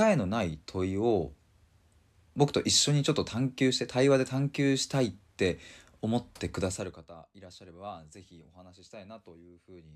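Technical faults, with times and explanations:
No technical faults are audible.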